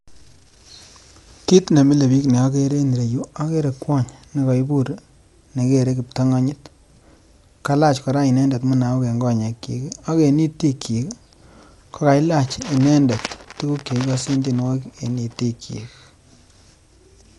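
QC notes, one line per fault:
Throughout, Dolby Digital compression: speech sounds dull and rough, cut flat above 11.4 kHz, with fluttering noise around harmonics. This is likely a low-bitrate AC-3 encode, which fits about 64 kbps, leaving many lines to dither noise. A spectrogram shows a ceiling and speckled noise between harmonics.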